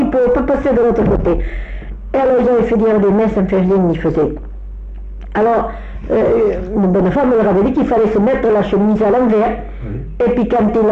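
Nothing stood out as a technical fault on listening to this audio.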